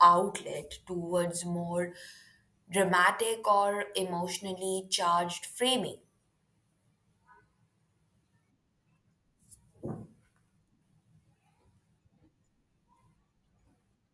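No technical faults are audible.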